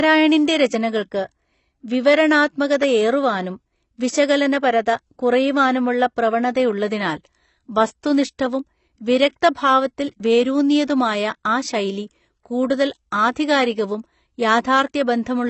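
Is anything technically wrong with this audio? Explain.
Yes. AAC compression damage runs throughout the speech. Nothing is heard above 8.1 kHz, so the top of the audio is missing and the sound is dull. The artefacts are plainly audible, with smeared sibilants and a warbling, fizzy texture on sustained sounds. The likely cause is low-bitrate AAC-LC coding, which fits a rate of about 24 kbps. The encoder lowered its cut-off and quantised the remaining frequency lines coarsely, leaving gaps and noisy patches in the spectrum.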